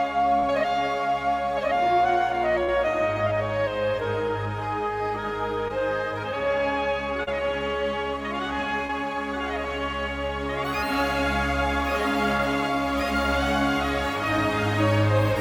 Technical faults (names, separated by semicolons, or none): short concealed packet loss